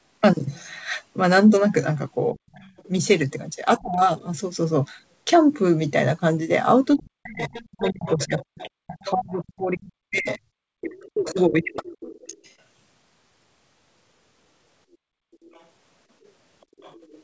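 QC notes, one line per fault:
2.33–2.43 s, 3.78–4.08 s, 6.96–11.8 s: speech suppressed in double talk. The speech dips by up to around 40 dB, likely because the echo canceller ducked everything while both sides talked.
2.52–2.88 s, 7.47–12.54 s, 15.34–17.22 s: other side's voice leaking through. A second voice sits roughly 20–30 dB under the speech, likely loudspeaker echo the canceller left behind.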